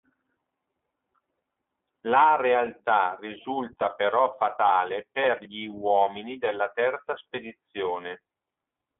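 From start to finish the speech passes through the iLBC codec, which fits 30 ms frames, coding each independently. Nothing survives above about 3.8 kHz, leaving speech narrowband and a little rough and synthetic.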